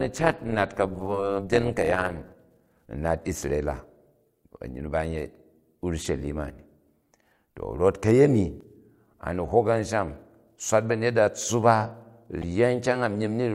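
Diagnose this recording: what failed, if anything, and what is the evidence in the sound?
Overlap-add ripple, 0 to 2.32 s: frame-based processing reassembled windows that don't sum evenly, giving a metallic buzz near 200 Hz, about 11 dB deep.

Damaged data in the compressed stream, 8.58 to 8.62 s and 12.40 to 12.44 s: the codec misreads corrupted frames and loses sync, producing brief glitches.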